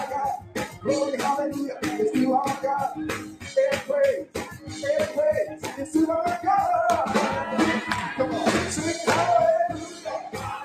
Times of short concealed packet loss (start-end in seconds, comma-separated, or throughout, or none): none